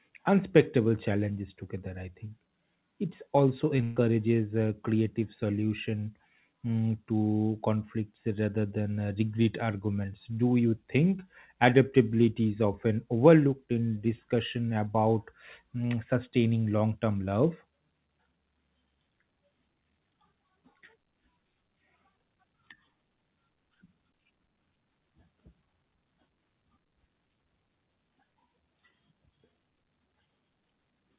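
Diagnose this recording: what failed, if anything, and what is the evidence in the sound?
Short concealed packet loss at 3.77–3.79 s and 3.81–3.83 s, a network fault. Each 10 ms hole was bridged by extending the preceding sound, leaving brief smears.

Burst of packet loss at 3.83–3.97 s, also in the network. About 130 ms went missing, replaced by a held, decaying continuation before the 4 kHz-limited call audio resumes further on.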